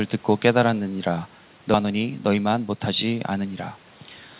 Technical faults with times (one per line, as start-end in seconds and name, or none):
1.74-1.76 skip ahead
1.84-3.78 jitter buffer speed-up